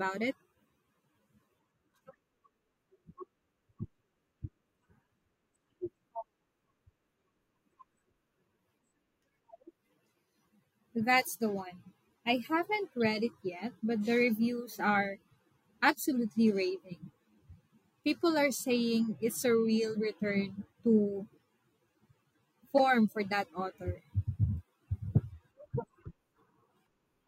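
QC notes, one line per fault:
11.01 s, corrupt frame decoded: bit errors in a couple of compressed frames were decoded anyway, misplacing spectral energy; a faint blip, around -40 dBFS, just before "the one I haven't".
13.05 s, corrupt frame decoded: about three damaged frames played through with wrong gains or codes, giving a brief chirp near -35 dBFS between "the one I haven't" and "it yet but the".
22.78 s, corrupt frame decoded: flipped bits in roughly two frames sent energy to wrong frequencies, producing a loud squeak near -15 dBFS just before "for that author".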